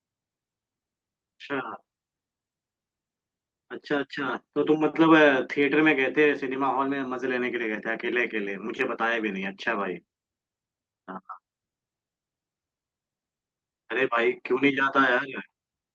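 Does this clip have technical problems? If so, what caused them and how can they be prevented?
No, nothing in this speech clip stood out as a technical problem on listening.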